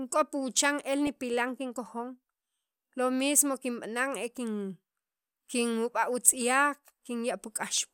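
Weak DAB reception let bit errors slip past error correction into the MP2 data of this speech clip, producing DAB burbling at 1.07–1.32 s and 6.30–6.41 s. Corrupted samples put short blips of noise into single sub-bands, and where corrupted scale factors get through, individual sub-bands leap in level for up to a frame.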